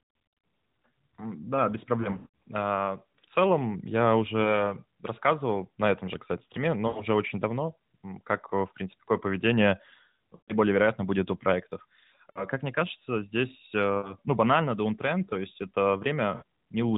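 Lost AMR speech frames interrupt the speech at 2.02, 4.42, 6.88, 10.36, 12.30, 13.98 and 16.36 seconds. Radio errors corrupted frames. The decoder bridged each gap by reusing its last good pitch and vocal tract settings at falling gain. At 2.02 the losses scatter over about 0.3 s, with one 80 ms run. The sound smears and sags there. Runs near 6.88, 10.36, 12.30, 13.98 and 16.36 sound drawn out. The single lost frame at 4.42 is a brief dip or warble. All sit within the narrowband codec's 4 kHz ceiling.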